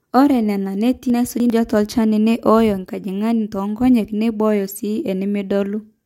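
A speech recording with chunks out of order between 1.1 and 1.5 s: one 100 ms chunk plays three chunks late, so that moment sounds jumbled, with three hard joins. Unlike a dropout or a repeat, no audio is missing or doubled, only rearranged.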